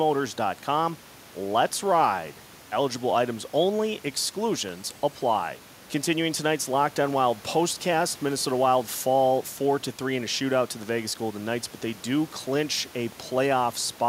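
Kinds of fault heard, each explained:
No faults are heard.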